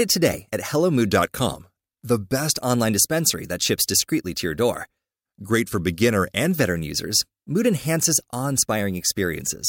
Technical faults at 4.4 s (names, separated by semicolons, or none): none